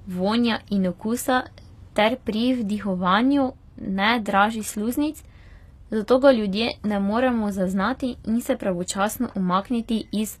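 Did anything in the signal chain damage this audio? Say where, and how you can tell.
Yes, at the codec stage, across the whole clip the treble sounds bright but synthetic: s sounds come out gritty and lispy, and nothing is left above 14.9 kHz. That's likely HE-AAC compression, rebuilding the top end from copied lower bands, which fits a low bitrate around 24 kbps.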